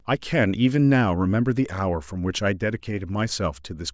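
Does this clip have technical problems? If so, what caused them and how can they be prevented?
No, this speech clip has no technical problems. There is nothing to trace to a cause and nothing that needs preventing.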